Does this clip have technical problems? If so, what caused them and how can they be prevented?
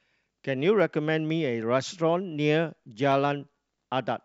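Yes. This speech clip has two sharp clicks, at 0.80 s and 3.12 s, most likely from dropped samples: a handful of samples, a fraction of a millisecond, went missing, so the waveform jumps abruptly from one value to a later one. Nothing audible is lost, but each jump shows as a step in the waveform and a thin vertical line across the spectrogram. Keeping the capture and processing buffers from underrunning or being skipped would prevent it.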